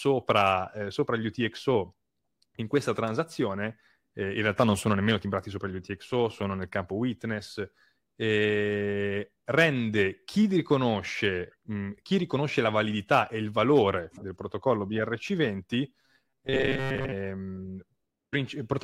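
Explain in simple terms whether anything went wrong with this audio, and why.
From 16.01 to 17.13 s, new audio likely arrived too slowly, so the player kept replaying a tiny 7.5 ms slice and skipped most of the real sound. This is robotic sound from repeated short buffers: the speech turns into a stiff, metallic buzz around 134 Hz.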